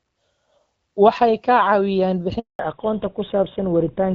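At 2.39 s the speech cuts out in a handover gap lasting 200 ms, until 2.59 s. The call is being passed from one network link to another, and no speech frames arrive while the switch completes, so the audio fades within a few tens of milliseconds and then holds dead silence. On the waveform this shows as a flat line. On a spectrogram it appears as a clean vertical blank band across all frequencies.

From 2.59 s to the end, the call shows a fallback to narrowband. Before the gap, the sound has the fuller, crisper quality of the AMR wideband (HD Voice) codec, with light coding damage consistent with a 12.65 kbit/s rate. After the switch, it sounds like an older narrowband codec, most plausibly GSM full rate at 13 kbit/s. Nothing remains above 4 kHz, so sibilants lose their edge and the speech turns duller and rougher. A spectrogram shows energy abruptly capped at a hard horizontal ceiling at 4 kHz, with empty space above it.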